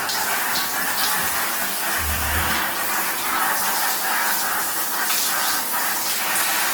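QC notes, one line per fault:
Throughout, Opus compression: plainly audible damage leaves tones noisy, rough and grainy rather than swirly, with content kept up to about 20.1 kHz. The likely cause is Opus in its CELT music mode, which fits roughly 16 kbps, filling bit-starved bands with folded or noise energy.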